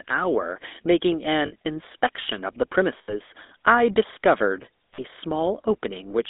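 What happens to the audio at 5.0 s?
From 4.94 to 5.00 s there are lost GSM frames. For about 40 ms, which fits two missing 20 ms frames, the decoder repeats the last good frame's settings, giving a brief rough, metallic ring. A spectrogram shows a smeared, frozen band pattern; the waveform shows a short, repetitive burst. Throughout, including this moment, the GSM full-rate codec adds a buzzy, gravelly roughness. On a spectrogram, the energy is confined to about 250 Hz to 3.7 kHz, with nothing above, and the harmonics look coarse and grainy.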